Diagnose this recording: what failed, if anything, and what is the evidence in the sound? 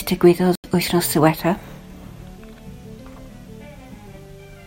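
Codec stage, corrupt frame muted: the speech drops abruptly to dead silence from 0.55 to 0.64 s, an 86 ms hole that fits roughly three rejected compressed frames. The decoder discarded the damaged frames and the player substituted zeros, so timing is preserved. The waveform shows a flat line, and the spectrogram shows a hard-edged blank column.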